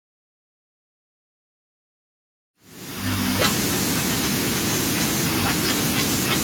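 Nothing stood out on listening; the speech simply rises in a smooth fade-in from about 2.5 s to full level at 3.57 s, as an editor would shape it.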